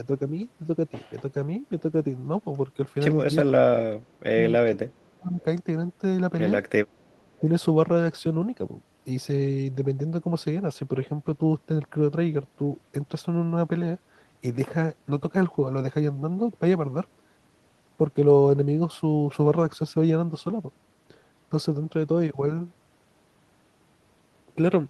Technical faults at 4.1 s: speech suppressed in double talk

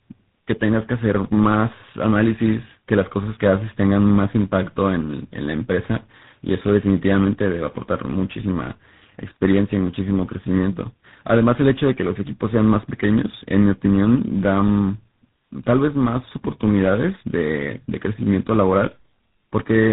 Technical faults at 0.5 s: tandem speech coding

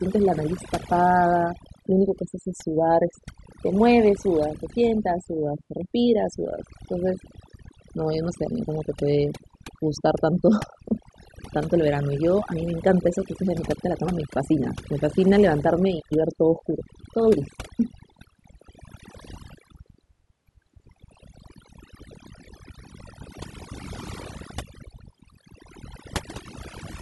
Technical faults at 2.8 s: overdone noise removal

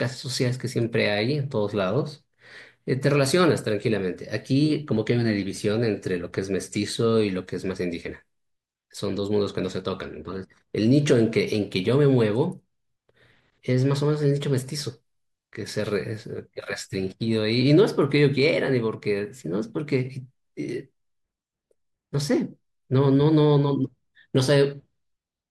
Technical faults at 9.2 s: none

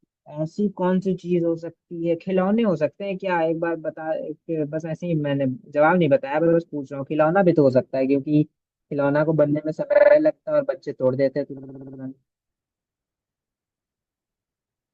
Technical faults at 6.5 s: repeated frames

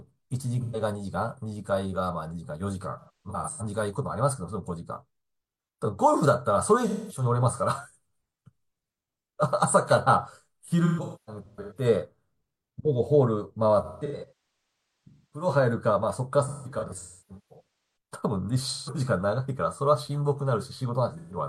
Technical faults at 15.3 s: AAC frame loss with concealment

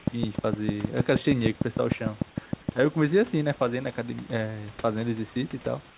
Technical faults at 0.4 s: train of clicks

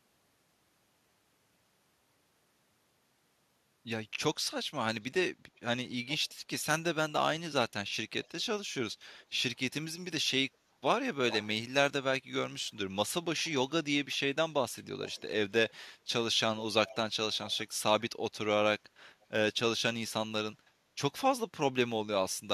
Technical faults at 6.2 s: echo leak

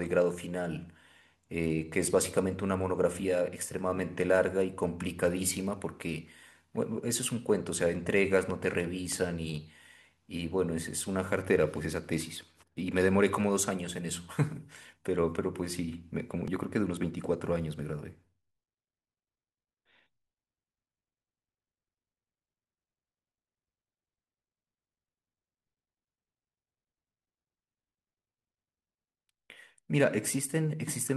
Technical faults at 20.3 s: none

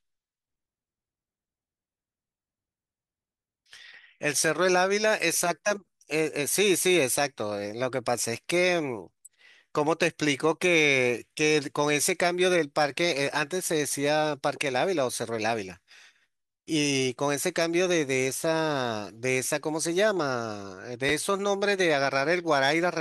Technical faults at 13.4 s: none

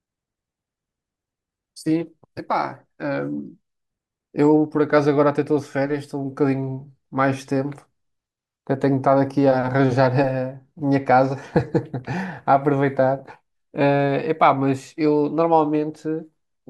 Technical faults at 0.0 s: none

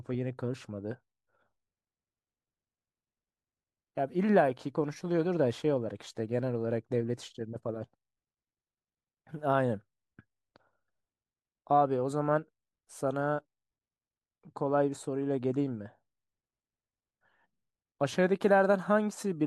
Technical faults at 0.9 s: none

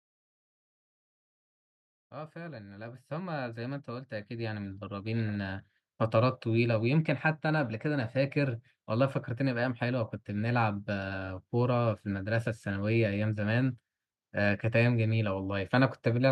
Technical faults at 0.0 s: none

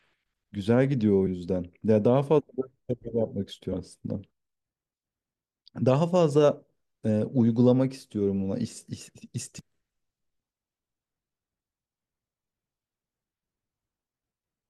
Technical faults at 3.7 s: damaged data in a compressed stream

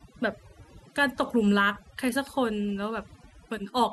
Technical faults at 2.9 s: overdone noise removal

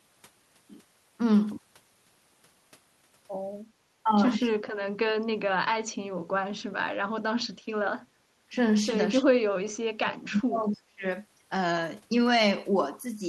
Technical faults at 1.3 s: none

